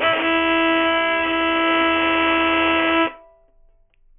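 Aliasing runs throughout: content above 3 kHz folds back as gritty, metallic false tones nearly as loud as the real sound, consistent with a drop to a 6 kHz rate; the spectrogram shows mirrored energy packed hard against 3 kHz.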